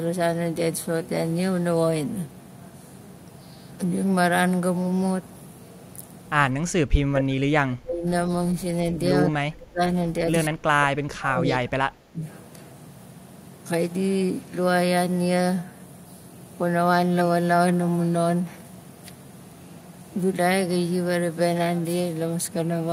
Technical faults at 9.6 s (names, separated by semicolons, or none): speech suppressed in double talk